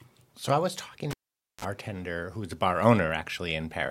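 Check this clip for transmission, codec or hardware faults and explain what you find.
One hardware fault turns up in the speech. Cable pulled and plugged in, 1.11 to 1.65 s, right after "I was talking": a live lead is pulled out with a pop, leaving about 490 ms of near silence. On reinsertion the plug tip touches before its ground, letting 37 ms of 50 Hz mains buzz through, then a second pop as the sound returns.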